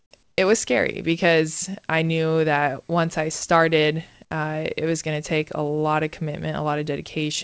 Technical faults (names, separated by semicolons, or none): comfort noise in place of the background